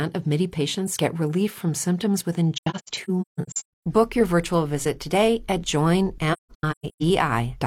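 From 2.55 to 3.86 s, right after "relief from symptoms within" and before "your virtual visit today", the speech keeps dropping into soft gaps. That's AAC frame loss with muting: frames went missing and the decoder zeroed them, so the overlapping windows fade each hole in and out. About 0.73 s vanishes in pieces, the longest around 150 ms. It happens again from 6.32 to 7.03 s, with about 0.51 s gone.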